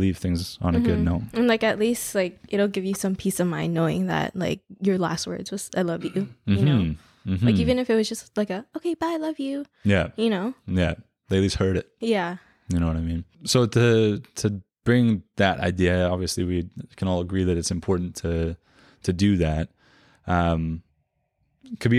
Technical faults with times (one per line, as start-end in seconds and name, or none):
none